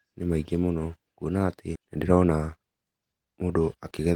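A speech clip in which, just after "maingĩ mũno kũona atĩ", playback jumps forward between 1.75 and 1.77 s, joining the two sides almost seamlessly while about 0.7 s of audio vanishes. This skip ahead means a run of later audio was already queued, and the stretch in between was dropped rather than played. From 1.85 to 4.07 s the speech sounds hurried, running at about 113% speed with its pitch unchanged. This is a jitter buffer speed-up: the receiver held too much audio and trimmed short pitch-period pieces repeatedly, cutting roughly a third of a second to reduce delay.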